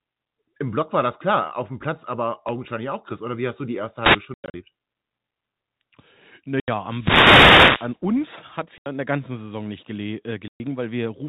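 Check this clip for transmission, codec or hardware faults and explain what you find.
Two kinds of fault occur: wireless microphone noise hits and packet loss filled with silence. The speech passes through G.711 telephone coding, which cuts everything above 4 kHz.

The first wireless microphone noise hit comes at 4.00 s, just after "hast du die erste", and lasts about 0.2 s. A second, much longer one runs from 6.87 to 7.99 s. The radio link from an analogue FM microphone faded as reflected signals cancelled. Receiver noise then rose over the sound. Both are heard as a swish of static laid across the speech.

Packet loss filled with silence cuts four stretches. From 4.34 to 4.54 s there are 160 ms of scattered gaps. The longest run is 100 ms. Further holes fall at 6.60 s for 80 ms and at 8.78 s for 80 ms, between "hat es" and "in der ganzen". A 120 ms hole starts at 10.48 s. Each hole is a multiple of 20 ms, which fits 20 ms packets. 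The receiver played silence where packets were lost. The sound drops out abruptly, with hard edges.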